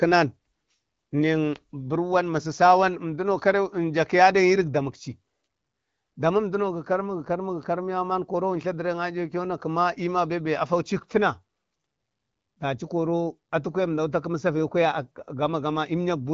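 No technical faults are audible in the speech, which carries the band-limited character of AMR wideband (HD Voice) coding at 12.65 kbit/s.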